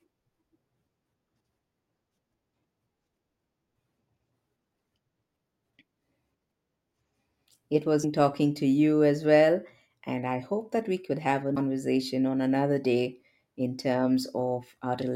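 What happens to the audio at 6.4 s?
Nothing goes wrong at 6.4 s: the speech carries straight through that moment with no dropout, click, distortion or other fault.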